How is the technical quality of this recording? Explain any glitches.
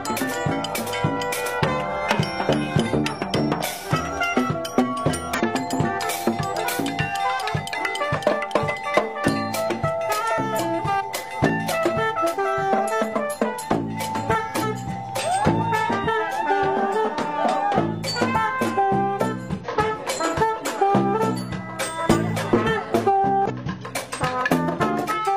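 The recording has two kinds of fault: five bursts of damaged data in a compressed stream and three sudden skips that point to dropped buffers.

The damaged data in a compressed stream occurs at 5.34–5.41, 10.55–10.60, 14.59–14.64, 19.60–19.67 and 23.46–23.51 s. Corrupted frames make the decoder misread them or lose sync until it finds the next header. Each event is a 50 to 70 ms chirp, squawk, click or brief hole, not a clean splice.

At 10.38, 11.49 and 14.35 s the sound jumps straight ahead, with no gap, by about 50 ms at the first point and about 20 ms at the others. The likely cause is a dropped buffer (overrun), where samples were overwritten before being read. It differs from the stream damage because nothing odd is inserted; the audio is simply missing.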